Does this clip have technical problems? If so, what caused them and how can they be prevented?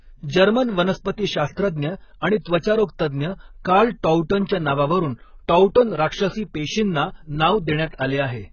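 Yes. Nothing is heard above 6.5 kHz, and the speech sounds heavily dull and smeared, likely from AAC compression at a bitrate that fits roughly 12 kbps. Encode at a higher bitrate to prevent this.

Pre-echo appears at 1.52–1.57 s, and at 2.59–2.63 s just before "तज्ज्ञ कार्ल". In each case, about 47 ms of hiss precedes a sharp attack because quantisation noise spreads across the transform block. Use a higher bitrate or an encoder with good block switching to prevent it.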